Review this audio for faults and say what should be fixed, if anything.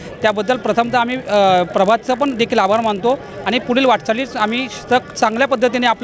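There's a resampler restarted on every block throughout: each 20 ms block gets converted on its own, so the edges glitch and leave a 50 Hz buzz, likely a 44.1 kHz to 16 kHz conversion. Keep one resampler running across the whole stream so its filter state carries over between blocks.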